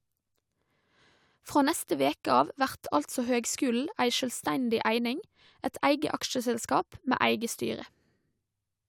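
No technical faults are audible anywhere in the speech recording.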